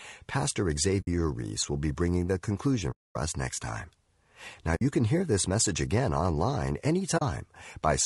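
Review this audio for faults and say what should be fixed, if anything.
Low-delay AAC compression throughout: the speech sounds rough and grainy, with noise between the harmonics. The likely cause is AAC-ELD's short frames resolving pitch poorly at a bitrate around 32 kbps.

AAC frame loss with muting at 1.01–1.07 s, 2.91–3.16 s (after "be bringing the conclusion", before "us next time"), 4.75–4.82 s (before "can hear this message") and 7.17–7.22 s (after "this message again online"). The decoder zeroed the missing frames, and the overlapping windows fade the sound into soft-edged silent gaps of 60, 240, 60 and 40 ms.

To prevent both, raise the bitrate and protect the stream against packet loss with redundancy or concealment, rather than muting lost frames.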